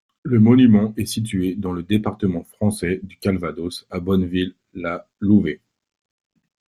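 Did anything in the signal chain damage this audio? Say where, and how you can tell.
No, nothing along the chain from capture to playback has audibly damaged this speech recording.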